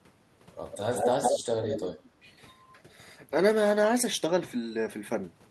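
From 0.72 to 1.44 s, an echo leak: a copy of the speech trails about 150 ms behind, roughly as loud as the original. From 1.62 to 2.09 s it returns, fainter. The likely cause is a far-end echo canceller missing loudspeaker pickup.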